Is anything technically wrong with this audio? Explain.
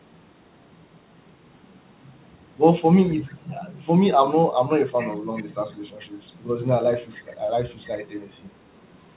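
Yes, there is echo leak in this speech.

Echo leak at 3.25–3.55, 4.97–5.13, 5.35–5.53, 6.01–6.05, 7.11–7.37, 7.83–7.87, 8.22–8.50 and 8.84–8.98 s. The far end likely plays the call over a loudspeaker, and its echo canceller lets some of the pickup through. That residue returns 406 ms late as faint scraps, about 20 to 40 dB below the speech.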